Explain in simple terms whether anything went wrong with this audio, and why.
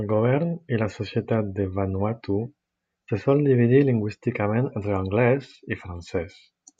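Nothing went wrong with this recording. It is a short piece of speech, and no technical fault can be heard anywhere in it.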